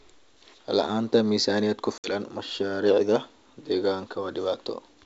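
Packet loss on an ADPCM call hits at 1.98 to 2.15 s. About 60 ms drops to silence, which points to a few packets. The decoder loses step, so speech returns slightly distorted.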